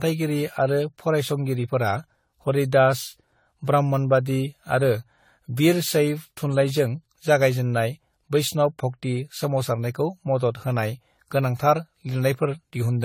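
The speech has most likely been through generation loss, decoded and re-encoded around ten times with a lossy codec that fits AAC-LC at 64 kbit/s. Throughout, the speech sounds swirly, smeared and hollow, with blurred attacks and nothing above 18.6 kHz.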